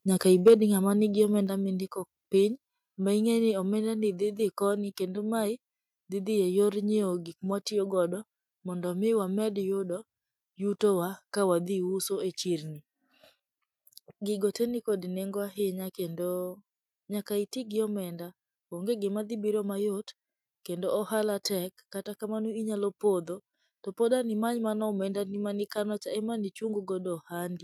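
From 0.47 to 0.54 s the speech turns harsh and crackly, its loudest peaks flattened by about 5 dB, with around 15% of samples cut. This is likely microphone overload, the input driven past the converter's limit.

At 0.48 s, voice and background drop together by about 3 dB in a single step, which points to the microphone volume being stepped down by the call software reacting to that clipping.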